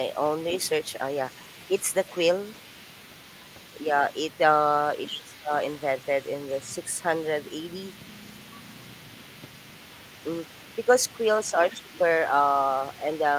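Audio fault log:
0.14–12.29 s and 12.61–13.38 s, other side's voice leaking through: a faint second voice, about 25 dB below the talker, sits underneath, likely loudspeaker echo the canceller failed to remove.
1.71–1.89 s, 5.08–5.52 s, 6.6–6.96 s, 11.41–11.92 s, speech suppressed in double talk: the talker's level dips by roughly 10 to 15 dB, likely the canceller turning both voices down during overlap.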